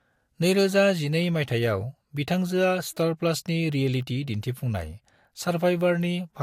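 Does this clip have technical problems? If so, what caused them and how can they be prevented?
Yes. Throughout the speech, low-bitrate codec artefacts persist. This is likely low-bitrate audio saved at a high bitrate, which the extra file size cannot repair. Encode from the original uncompressed source instead.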